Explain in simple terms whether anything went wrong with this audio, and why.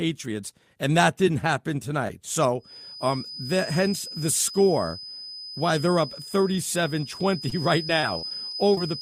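Feedback whistle, from 2.57 s, just after "that didn't happen tonight", to the end: a thin 5 kHz tone that slowly swells and fades sits well below the speech, likely from loudspeaker sound leaking back into the microphone.

Repeated packet loss (robotic sound), from 7.49 to 8.79 s: chunks of audio kept going missing, and each short hole, up to 38 ms, was patched by stretching what came before. That makes the speech choppy and robotic.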